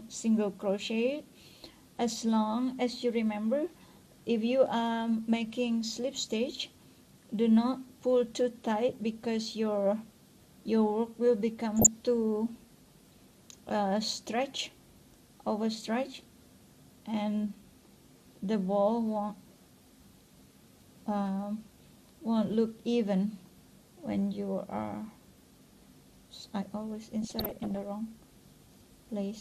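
The clip is likely MP2-encoded at a low bitrate, consistent with roughly 80 kbps. Layer II cannot fund all 32 sub-bands, so upper bands drop out or flicker while the rest are coarsely quantised, leaving dull, granular, gurgling sound throughout. On top of that there is DAB burbling: weak reception lets a small fraction of a percent of bit errors slip past error correction into the MP2 data. Corrupted samples put short blips of noise into individual sub-bands, and corrupted scale factors make sub-bands jump in level for up to a frame, producing burbling from 11.77 to 11.87 s and a longer burst from 27.22 to 27.76 s.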